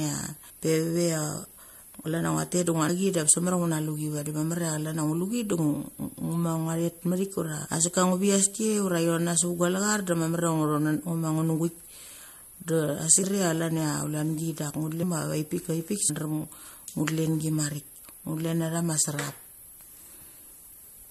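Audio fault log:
13.23 s, compressed frames skipped: the speech jumps forward with a short, smeared blip rather than a hard click, and roughly 300 ms of sound is gone. Around fifteen compressed frames, consistent with a 21.3 ms frame length, were missing or rejected by the decoder, and overlap between neighbouring frames softens the join.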